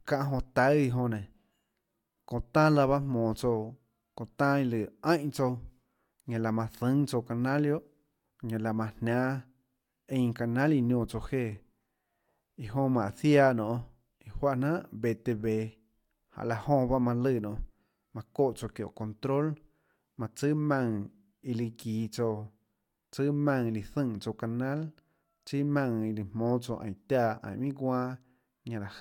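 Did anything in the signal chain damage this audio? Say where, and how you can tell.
No, nothing in the signal chain damaged this audio.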